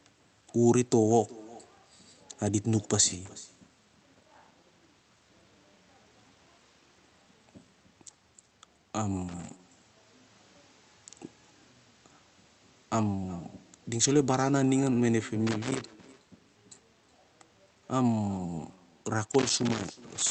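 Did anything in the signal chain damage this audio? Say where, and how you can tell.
Yes. In call processing, echo with no canceller: the far end's loudspeaker feeds its microphone unchecked, so every phrase returns about 23 dB quieter, roughly 0.4 s late.

In the analogue wiring, loose connector crackle: a dirty contact making and breaking chops the signal into irregular scratching at 3.26–4.72, 9.28–11.07, 15.47–16.49 and 19.24 s to the end.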